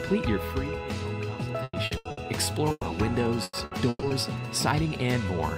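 From 1.63 to 2.20 s, repeated packet loss breaks the audio into a choppy, robotic stretch. Four gaps, the longest 100 ms, are patched by extending the preceding sound, so roughly half this span is synthetic fill and about 180 ms of real content is gone.

At 2.71 to 2.86 s, a burst of packet loss produces about 120 ms of extended, fading sound ending in roughly 30 ms of silence. When playback resumes, about 120 ms of audio has been skipped.

From 3.43 to 4.13 s, repeated packet loss returns with four more gaps, the longest 130 ms. Concealment covers about 44 percent of the span, again giving a robotic, stuttering texture with around 180 ms missing.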